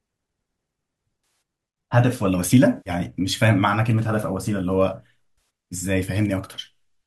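At 1.24 to 1.42 s, 2.77 to 2.90 s and 5.38 s the speech breaks into brief smeared, noisy patches: AAC frame loss with concealment. About 140, 90 and 80 ms went missing, the first and last scattered in runs of around 50 ms, which fits the short frames of what is likely low-delay AAC. The decoder refilled each gap from the last good spectrum. On a spectrogram, harmonics blur into vertical grey smears; the waveform shows dips or flattened stretches.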